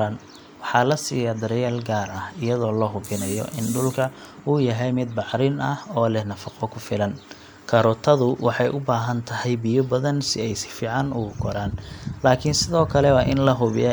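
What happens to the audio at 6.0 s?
At 6.0 s the speech runs on intact, with no dropout, click, distortion or other fault at that moment.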